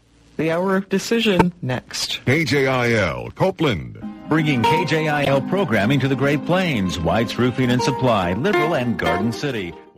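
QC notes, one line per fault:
1.33–1.45 s: corrupt frame decoded. A burst of several damaged frames was played as if valid, so misread gains and codes throw energy into the wrong frequencies, heard as a harsh chirp peaking around -5 dBFS.
5.22–5.30 s: corrupt frame decoded. A shorter run of bad frames produces a similar loud squeak of misplaced spectral energy.
8.23–8.25 s: corrupt frame decoded. A single garbled frame gives a brief, quieter blip, around -15 dBFS.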